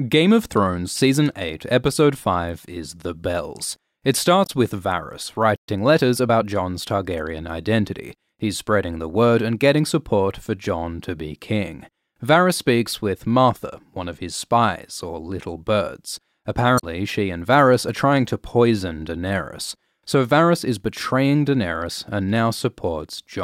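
A speech recording with damaged data in a compressed stream at 4.43–4.50 s and again at 16.77–16.83 s. Each time the decoder misreads the corrupted frames and resynchronises on the next header, giving a brief glitch; a spectrogram shows a short broadband smear, and the waveform jumps abruptly. At 5.56 s the audio drops out for 120 ms, most likely a playback stall where the player ran short of data. The waveform shows a flat gap and the spectrogram a blank vertical band. From 5.68 to 6.48 s comes time-compressed catch-up: the player trims its backlog by splicing out small pieces and cross-fading, so the speech runs about 1.15 times fast at unchanged pitch. On a spectrogram the harmonics stay at the same height while syllables sit closer together.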